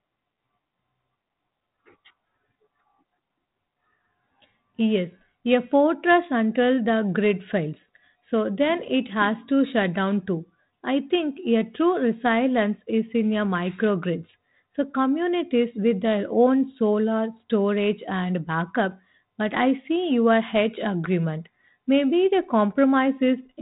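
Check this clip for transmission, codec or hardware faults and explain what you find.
No transmission, codec or hardware faults are audible anywhere in this speech recording.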